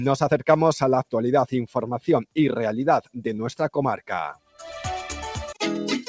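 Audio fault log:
4.34–4.6 s, sound cut by the noise suppressor: the suppressor mistook part of the sound for background noise and turned it down, by about 17 dB at its deepest, so for roughly a third of a second the audio sinks in level within the 8 kHz band of the G.722 call path.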